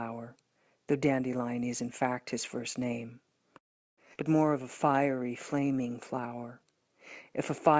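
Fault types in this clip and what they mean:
Call audio freeze: the sound stops at 3.58 s and resumes at 4.00 s, a gap of about 0.4 s that is nearly all silence. Nothing appears to be lost. Playback picks up where it left off. Packets were likely held up in transit, leaving the jitter buffer empty.
Skip ahead: at 4.14 s the audio jumps forward with only a tiny join. Roughly 0.3 s of sound is gone. The two sides meet almost directly. A stretch of audio was dropped while later audio was already waiting.
Jitter buffer slow-down: from 4.49 s to 7.30 s playback runs at about 91% speed, with no pitch change. The receiver repeated short pitch periods and bits of pauses, adding 254 ms in total. Sounds are drawn out.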